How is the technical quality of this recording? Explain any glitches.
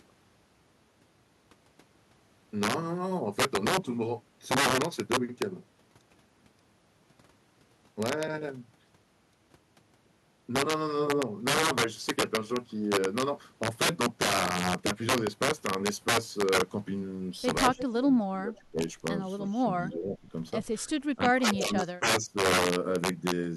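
The recording has serious faults. Loud speech cracks harshly throughout, and a stretch near the end shows echo and dropouts typical of a speakerphone call.

Integer overflow runs through the whole clip. Loud peaks are pushed about 11 dB past the integer limit. They wrap to the opposite sign rather than being held at the ceiling. Only a small share of samples is affected, but each one produces a violent crack, far sharper than clipping.

An echo leak appears at 17.77–17.93 s, and again at 18.56–18.60 s. A copy of the speech returns 328 ms late. It is fairly strong the first time and barely audible the second. The likely cause is a far-end echo canceller letting loudspeaker sound back through the microphone.

Speech suppressed in double talk occurs at 18.01–18.06, 18.22–18.81, 19.68–20.33, 20.88–20.95 and 21.16–22.37 s. The voice dips by up to about 20 dB, losing level in pieces. This likely happens because both sides spoke together and the echo canceller turned everything down.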